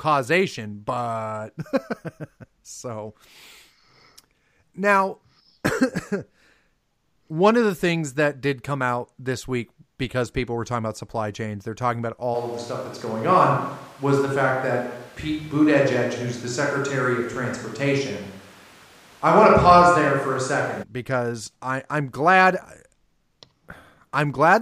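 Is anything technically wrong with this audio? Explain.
Yes, there is one fault. From 12.36 to 20.82 s the speech turns hollow and roomy with thinner bass, at nearly unchanged level, and room noise sits about 30 dB below it. This is likely a switch to a distant microphone, with the close microphone's signal missing, and both transitions are abrupt.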